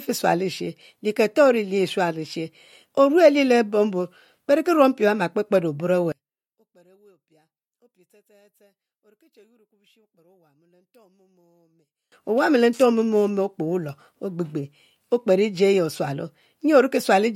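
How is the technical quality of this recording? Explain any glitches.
There's one real glitch. From 6.12 s to 12.12 s the speech drops away almost completely, about 36 dB down, leaving only a faint ghost of it. That's most likely one channel inverted: if one side of the stereo pair has its polarity flipped, summing to mono cancels everything the two channels share. A centred voice is exactly that shared content, so it nearly vanishes, and only the small left-right differences survive.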